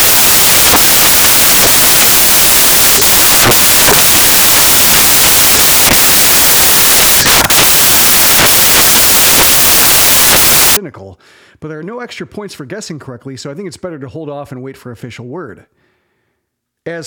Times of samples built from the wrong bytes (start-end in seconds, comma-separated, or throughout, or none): 0.00-10.77